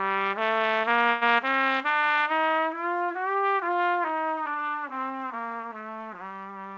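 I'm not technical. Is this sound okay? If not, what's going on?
No. At 1.10 s the audio briefly stalls: for about 0.12 s, until 1.23 s, the last bit of sound is stretched into a short fading buzz, and then everything carries on from where it paused. This is a call audio freeze. Data was likely held up on its way through the call, so the receiving end filled the wait itself. Nothing is lost, but everything after it runs slightly late. The call also keeps nothing above 8 kHz, so the very highest sounds are missing throughout.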